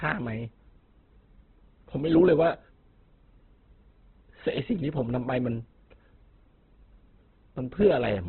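A speech clip that sounds narrow and grainy from start to finish: nothing survives above about 4.4 kHz, so sibilants lose their edge, and the remaining tones have a rough, noisy texture rather than a swirling one. That combination is likely Opus compression in its CELT music mode, starved of bits. The encoder has kept each band's energy but filled the gaps with folded or noise content, and the narrowed bandwidth points to a very low bitrate, around 12 kbps.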